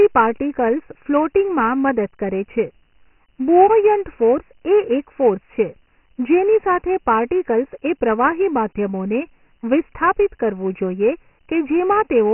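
Throughout, Dialogic VOX ADPCM coding limits the speech. Nothing reaches above 3 kHz, which fits a 6,000-sample rate, and heavy gritty hiss trails every phrase.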